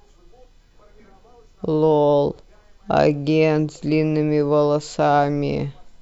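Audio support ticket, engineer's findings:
No technical faults found in the speech signal on review; no dropouts, level problems or timing disturbances observed at any point.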